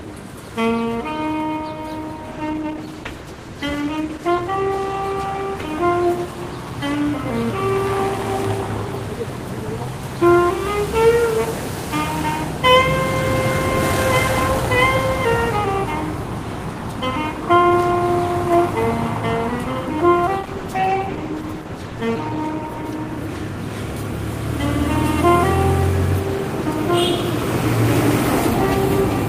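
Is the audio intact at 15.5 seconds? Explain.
Yes, the audio is intact at 15.5 seconds, with no fault to be heard at that moment.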